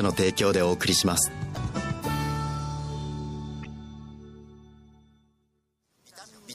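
Throughout the clip the sound has a watery, swirling texture, with metallic chirps on bright transients and smeared attacks. This is likely MP3 compression, and the plainly audible damage suggests a low bitrate, around 64 kbps.

At 1.53 s and again at 3.62 s there is a short glitch lasting about 40 ms. This is damaged data in a compressed stream: the decoder hits corrupt frames, loses sync, and searches for the next valid frame header.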